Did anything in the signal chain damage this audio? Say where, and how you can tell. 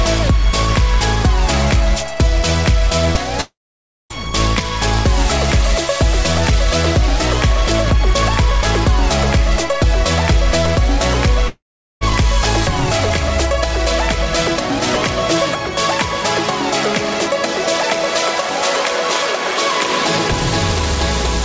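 Yes, at the network stage. There are two gaps, 3.41 to 4.13 s and 11.48 to 12.04 s. In each, the last bit of sound smears into a fading buzz, then goes silent for about 0.56 s and 0.42 s before the audio picks up again, with roughly 0.69 s and 0.54 s of material simply gone. That's likely a long network dropout, with the receiver concealing it and then giving up. The G.722 path itself tops out around 8 kHz.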